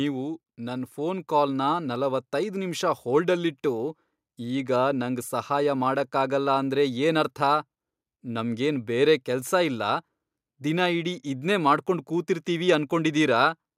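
Automatic gain rising: an automatic gain control in the capture chain judged the incoming level too low and pushed its gain up slowly, by about 5 dB between 0.56 s and 5.33 s of this speech recording. Because the gain sits before everything, the talker and the room noise behind them grow louder together over those nearly five seconds, so the sound seems to creep closer rather than the speaker raising their voice.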